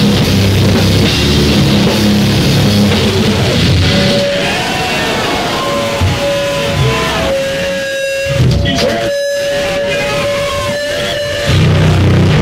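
No technical faults can be heard anywhere here.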